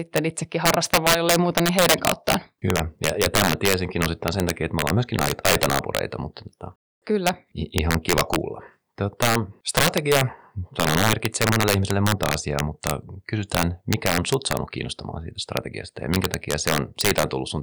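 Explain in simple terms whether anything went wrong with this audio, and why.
Sharp, violent cracks burst out of the speech all the way through the clip, landing on the loudest moments rather than on any single spot. They are far harsher than ordinary distortion. This is integer overflow. The recording was pushed too loud for the numbers used to store it, and instead of being held at the ceiling, each peak that went over wrapped around to the opposite extreme. Only a small share of the sound crosses that line, but every crossing snaps into a crack.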